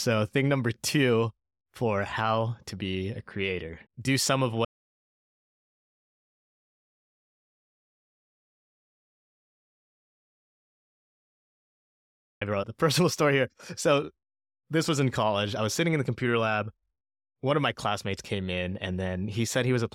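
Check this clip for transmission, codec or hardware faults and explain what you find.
The speech cuts to dead silence from 4.65 to 12.41 s, right after "some of", and resumes mid-flow at "wrote the", with no room tone in the gap. This audio dropout to silence, about 7.8 s long, likely comes from lost input while the recorder kept writing zeros.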